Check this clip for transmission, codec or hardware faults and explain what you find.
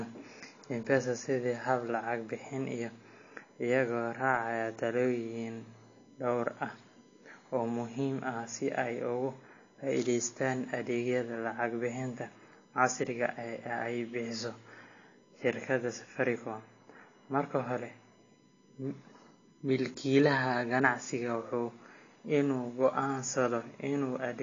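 Two faults run through the whole recording: a USB whine and band-limited, smeared sound consistent with low-bitrate AAC compression.

USB whine is present from start to finish. Current drawn in the bus's 1 ms frames leaks through power or ground, producing a steady fixed-pitch tone at 1 kHz with harmonics, strongest at 18 kHz. It sits faint, around 40 dB below the speech.

The codec damage is also continuous and plainly audible. Nothing survives above 7.1 kHz, so the speech sounds dull, with smeared, warbling texture on sustained sounds and sibilants. The likely cause is AAC-LC compression at a low bitrate, which fits roughly 32 kbps. The coder quantises its frequency lines too coarsely and lowers the cut-off to save bits.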